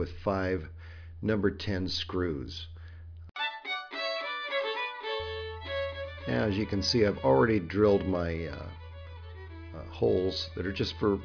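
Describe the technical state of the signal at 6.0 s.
At 6.0 s the signal is intact, with no dropout, clipping, glitch or other technical fault audible at that moment.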